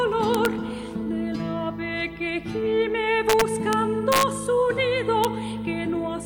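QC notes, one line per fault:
0.35–0.46 s, 3.30–3.73 s, 4.12–4.23 s and 5.24 s: integer overflow. Loud peaks push past the largest value the integer can hold. They are not held at the limit. They wrap to the opposite sign, so each peak jumps across the full range. That is heard as violent cracks, far harsher than clipping. The drive past the limit is small, about 1 dB in the first two bursts and about 2 dB in the third. At 5.24 s the peak sits right at the limit.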